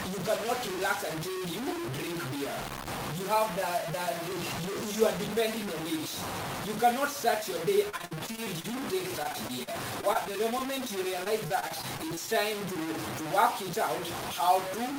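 From start to finish the sound is coarse and grainy, with distortion that tracks every change in level, the likely result of low bit depth without dither, truncated to roughly 4 bits.

Repeated packet loss gives choppy, robotic stretches from 7.89 to 8.75 s, 9.23 to 10.67 s and 11.24 to 12.35 s. Holes up to 57 ms are patched by repeating the preceding sound.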